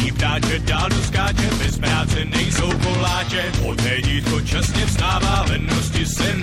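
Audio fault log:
throughout, MP3 compression. Quiet detail swirls with a watery quality. Attacks smear. The likely cause is MP3 encoding starved of bits, which fits a low bitrate around 64 kbps. Weak frequency lines drop in and out between frames.
5.45 s, corrupt frame decoded. A brief glitch, peaking at about -25 dBFS. Damaged data in roughly a couple of compressed frames was decoded anyway. Misread values put energy at wrong frequencies for that moment.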